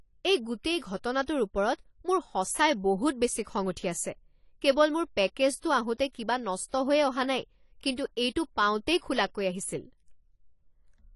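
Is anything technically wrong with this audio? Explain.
Yes. Throughout the clip, the speech carries plainly audible damage from AAC compression, likely AAC-LC at a low rate that fits about 32 kbps. At that budget the encoder quantises its frequency lines coarsely against the hearing model and drops the top of the spectrum, so nothing is present above 11.5 kHz. The speech sounds dull and smeared, with a watery, fizzy texture on sibilants and held sounds where too few bits describe the detail.

Pre-echo appears twice, from 1.26 to 1.28 s and at 7.96 s. In each case a sharp attack fell late inside a transform block, and the quantisation noise sized for that loud onset was spread across the whole block, including the quiet stretch ahead of it. The first smear reaches back about 23 ms and the second about 16 ms. Each attack is preceded by a brief hiss and lands softened rather than crisp.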